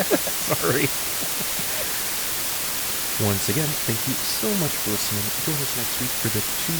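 From start to finish, the speech sits under low bit depth with dither: only 3 bits carry the signal, and dither was added before rounding, so the quantisation error becomes a constant, even white hiss roughly as loud as the speech itself, with no distortion.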